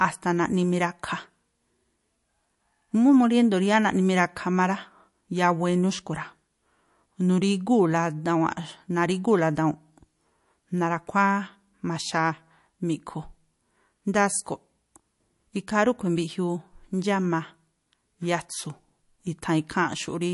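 From start to finish the speech has a watery, swirly quality, and the s sounds pick up a metallic chirp. Nothing comes through above 11.3 kHz, so the top end sounds sliced off. That's most likely MP3 compression squeezed hard, which fits a bitrate around 48 kbps. The encoder runs short of bits, chops the treble at a fixed point and drops quieter frequency detail that flickers in and out between frames, and the consonant attacks smear.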